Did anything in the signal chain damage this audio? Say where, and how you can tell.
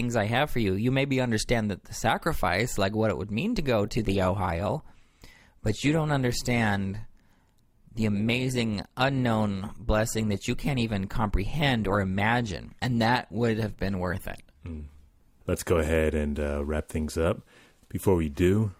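Yes, the network stage. From 3.81 s to 15.81 s the speech suddenly picks up codec artefacts, then snaps back just as abruptly, with no gap either time. That's an adaptive stream at a lower bitrate. The connection likely slowed, so the player switched to a cheaper encoding for those 12 seconds. The sound fits Opus dropping from around 64 to 24 kbit/s.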